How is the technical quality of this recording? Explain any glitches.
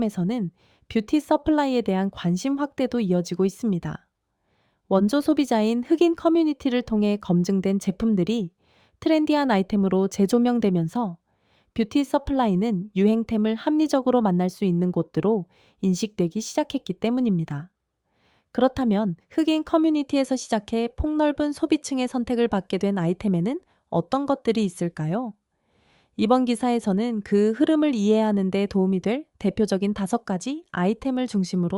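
The first twenty seconds carry a clear fault: imaging from linear upsampling, running from 0.0 to about 19.77 s. The rate was raised by joining samples with straight lines, which filters poorly, so the top of the band is dulled and a faint mirrored copy of the spectrum sits above it. That copy fills roughly 12 kHz to 24 kHz, around 40 dB below the signal, which points to a 24 kHz source raised to 44.1 kHz. It is heard as a light metallic shimmer on bright, hissy detail. On a spectrogram, energy fades toward 12 kHz, then a dim inverted reflection of the content appears above that line and stops near 19.77 s; the waveform shows no obvious change.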